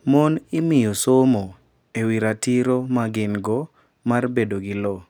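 Listening to the speech recording, nothing stood out as a technical fault at any point.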